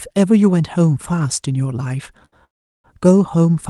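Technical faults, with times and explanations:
2.25–2.34 s, short stall from a late packet: a packet arrived late and the jitter buffer ran dry, so about 68 ms of sound is held and stretched, then resumes unbroken.
2.44–2.86 s, call audio freeze: packets were likely held up in transit, emptying the jitter buffer; a brief fading fill gives way to about 370 ms of silence before the speech picks up where it stopped.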